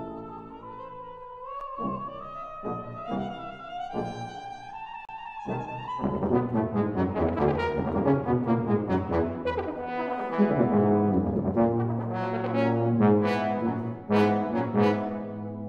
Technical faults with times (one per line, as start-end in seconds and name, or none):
1.61 CD skip
5.05-5.09 CD skip